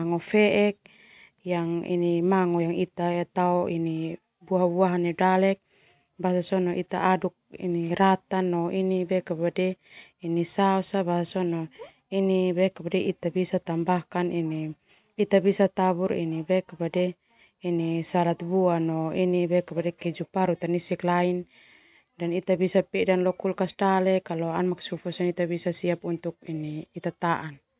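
No technical faults can be heard anywhere in the speech recording.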